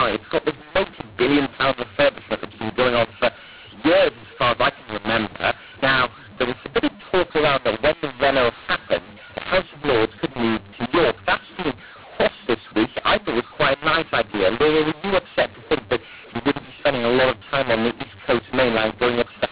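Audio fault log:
Throughout, mu-law and A-law mixed up: the speech was coded with G.711 A-law but decoded as mu-law, mapping each code to the wrong level. Loud and soft samples come out scrambled, giving harsh distortion, and near-silent samples are lifted, filling pauses with noise.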